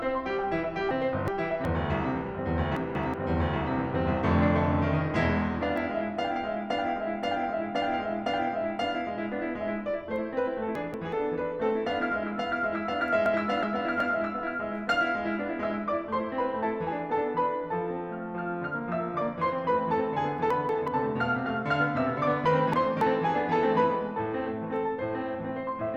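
A garbled flutter breaks into the music six times: 0.91–1.65 s, 2.77–3.14 s, 10.75–11.13 s, 13.26–14.01 s, 20.51–20.88 s and 22.46–23.01 s. These are frames out of order. Two adjacent blocks of 186, 279 or 372 ms play in swapped order, which fits runs of two to four frames, and no time is lost.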